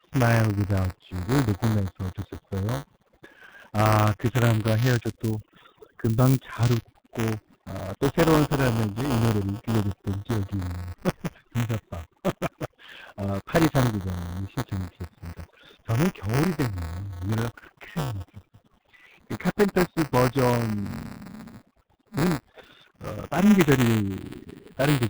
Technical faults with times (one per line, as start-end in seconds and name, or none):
0.00-25.10 overdone noise removal
0.00-25.10 G.723.1 codec
0.00-25.10 buffer tearing